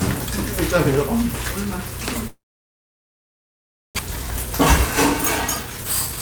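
A recording of everyday sounds with a long network dropout from 2.27 s to 4.01 s, likely caused by packets failing to arrive. The last sound smears into a fading buzz or hiss, then about 1.6 s of near-silence shows as a blank band on the spectrogram and a flat waveform, and roughly a second of material never returns. After it, jitter buffer speed-up trims short pitch-period pieces to shed the built-up delay: from 4.08 s to 4.52 s the audio runs at 109% speed, losing around 50 ms, and from 5.42 s to the end at 118%, losing about 150 ms. Pitch stays level, but events arrive hurried and compressed in time, with harmonic bands unshifted.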